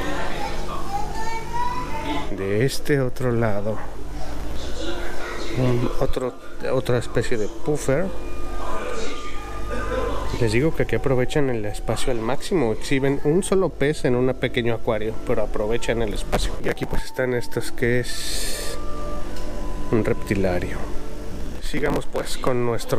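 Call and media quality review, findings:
Processor overload crackle at 4.31–4.71 s, 16.33–16.98 s and 21.28–22.47 s: gritty tearing bursts. Audio engine missing its deadlines back to back. Each skipped buffer leaves a hard-edged gap, and the sound points to tiny buffers of a few ms.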